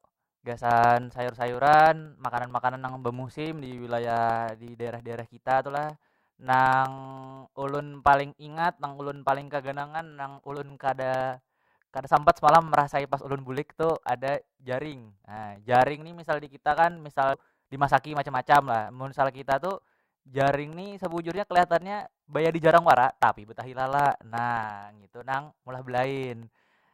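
From 0.07 s to 26.87 s, the speech is broken by periodic USB or driver dropouts. Every 0.064 s, about fifteen times a second, roughly a millisecond of audio goes missing. Each gap is filled with silence. Something in the system is blocking the USB bus or the audio driver on a fixed schedule. Hundreds of these gaps run through the clip. They sound like a steady ticking buzz riding on the speech, heard only while the voice is sounding.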